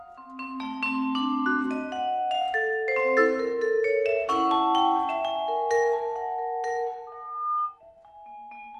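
At 7.07 s a loudspeaker feedback squeal starts: a 1.2 kHz tone swells over a little under half a second until it matches the rest of the sound, then stops at 7.79 s. A spectrogram shows one bright horizontal line; the waveform thickens steadily.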